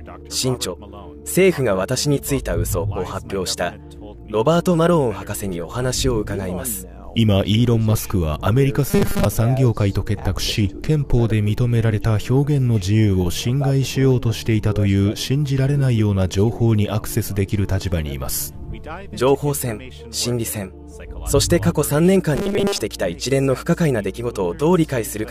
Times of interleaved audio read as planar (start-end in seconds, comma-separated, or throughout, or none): none